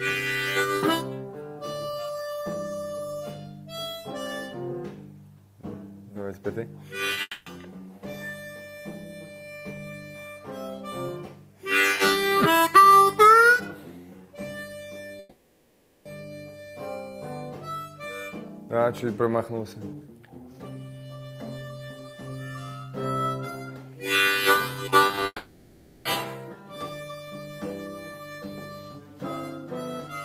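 At 7.13 s a brief smear begins, followed by a second one from 7.15 to 7.18 s. Together they sound like a small wobble, with the sound held over its own last moment. This is short concealed packet loss: about 10 ms and then 20 ms of audio arrived too late to decode. The receiver bridged each hole by extending what it had just played and then blended back into the real signal.

From 7.21 to 7.47 s the sound turns into a fading continuation of itself, a buzz or hiss with a final 30 ms of silence, before the audio resumes. This is most likely a long network dropout. About 250 ms never arrived, and the receiver stretched the last sound across the gap, so that stretch is gone.

The same thing happens from 15.19 to 16.06 s. A full 860 ms is replaced by an extended, decaying continuation with no silent stretch, and the audio picks up again further on with the middle missing.

From 25.07 to 25.26 s the sound goes choppy, with pieces missing. 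This is repeated packet loss. Several separate holes, none longer than 20 ms, are patched one after another, 70 ms in total and about 37% of that stretch. It then runs straight into what is likely a long network dropout from 25.26 to 26.06 s, where roughly 790 ms is filled by a fading continuation ending in 40 ms of silence.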